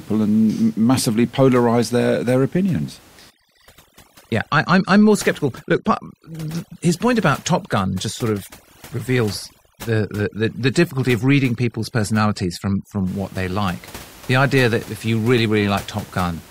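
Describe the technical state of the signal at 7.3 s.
A background that drops and breaks up into twinkling specks: overdone noise removal, running from 3.30 s, after "polarized their their opinions", to 13.07 s, before "what they like". Set too strongly against room noise about 24 dB below the speech, the reducer is pushing individual frequency bands far down whenever they sit near its noise estimate, stripping the quieter parts of the voice along with the noise.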